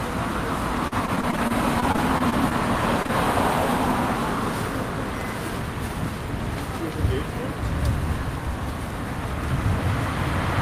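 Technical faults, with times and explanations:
0.87–2.53 s, repeated packet loss (robotic sound): 13 separate holes fall within about 1.65 s, the longest 42 ms, and together about 15% of the stretch is synthesised rather than real. Each hole is bridged by extending the last stretch of sound, and the next hole arrives before the audio has settled again. The repetition is what sets it apart from an isolated dropout: the patches stack into a choppy texture with bits missing.
3.03–3.07 s and 3.07–3.10 s, short concealed packet loss: two back-to-back holes, each about 20 ms of missing audio, are filled by the receiver continuing the preceding sound and then blending back into the real signal. These brief patches come out as a quick smear or wobble, and a very short sound inside them can disappear. Unlike the earlier run, they are a single isolated pair, so the audio does not take on a sustained robotic, metallic character.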